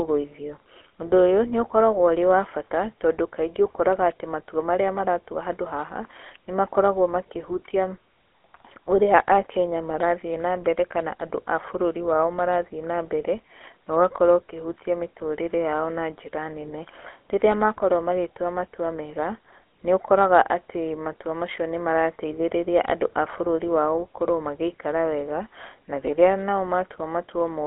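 From start to end, the speech carries plainly audible GSM full-rate codec damage. A vocal-tract model driven by sparse, regular pulses rebuilds the voice, leaving a buzzy, gravelly roughness. The band spans 300 Hz to 3.4 kHz, nothing above 3.8 kHz, which fits a 13 kbps stream.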